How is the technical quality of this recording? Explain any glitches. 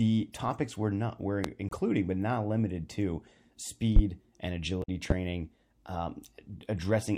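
The recording is marred by two kinds of fault: three loud pops and two stretches of damaged data in the compressed stream.

The loud pops fall at 1.44–1.48 s, 3.96–4.00 s and 5.10–5.14 s, each a single sharp click around 20 dB above the speech and lasting about 40 ms. A sudden voltage step or pulse, likely from a switch, plug contact, static or a driver glitch, is added to the signal, and the following circuitry shapes it into a brief thump. The speech carries on unbroken underneath.

The damaged compressed data appears at 1.69–1.76 s, just after the first pop and still between "topics were not were" and "but not limited to", and again at 4.80–4.89 s. Corrupted bytes make the decoder misread or reject frames and lose sync while it hunts for the next valid frame header. Instead of a clean pulse over intact speech, the speech itself is replaced by a brief chirp or squawk of about 70 to 90 ms.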